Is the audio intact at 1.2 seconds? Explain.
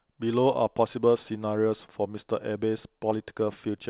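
Yes, the speech at 1.2 seconds is intact, carrying only the ordinary narrowband character of the G.711 mu-law call path, with nothing above 4 kHz.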